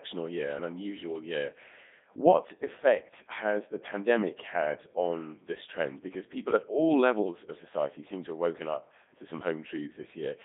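Speech, run through a Codec 2 vocoder for the whole clip. The voice is rebuilt from sine waves, so it sounds robotic and buzzy. Heavy damage fits the 3.2 kbit/s mode. Sound sits between 200 Hz and 3.7 kHz, with nothing above 3.8 kHz.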